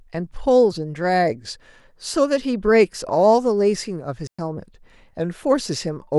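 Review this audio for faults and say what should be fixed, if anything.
A digital wireless dropout cuts the speech from 4.27 s to 4.39 s, a clean hole of near silence lasting about 115 ms. The receiver lost too much of the incoming data stream to reconstruct the signal, so it muted the output with a very short fade rather than passing corrupted audio, which is why no burst of noise is heard on either side. Prevention: keep line of sight to the receiver antennas and choose a clear channel.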